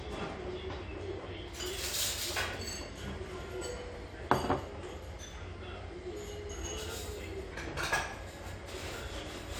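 No technical faults are audible.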